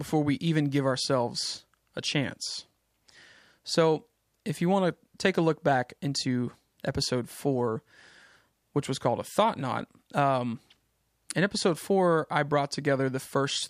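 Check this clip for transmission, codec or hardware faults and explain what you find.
No fault turns up anywhere in this speech recording. Nothing in the audio calls for further comment.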